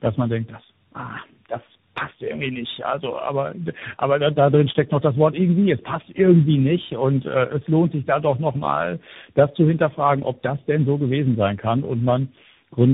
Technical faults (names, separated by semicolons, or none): tandem speech coding